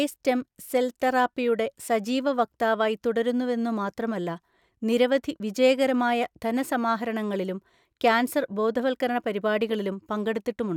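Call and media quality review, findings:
No audible faults found.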